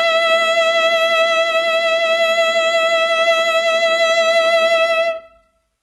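The music has most likely been squeezed through HE-AAC compression at a very low rate, consistent with something near 16 kbps, and the damage is heavy from start to finish. The coder keeps only the lower spectrum and synthesises the treble by copying lower bands upward, so the top end sounds bright but false: cymbal and high harmonic detail comes out gritty and metallic, and nothing survives above 11.7 kHz.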